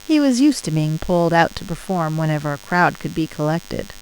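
Throughout the speech, DECT cordless phone buzz: nearby radio bursts every 10 ms get rectified, giving a thin, harmonic-rich 100 Hz rasp well below the voice, unlike smooth mains hum.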